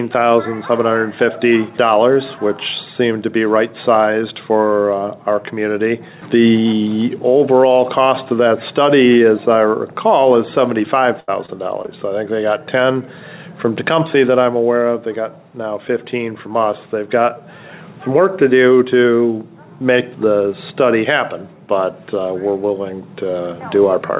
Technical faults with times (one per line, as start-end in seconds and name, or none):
11.20-11.89 repeated packet loss (robotic sound)